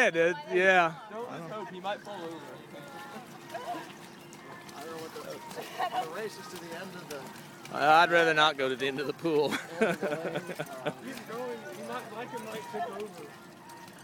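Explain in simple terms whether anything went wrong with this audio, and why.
Nothing stood out on listening; the audio sounded as it should throughout, with no glitches or problems to point to.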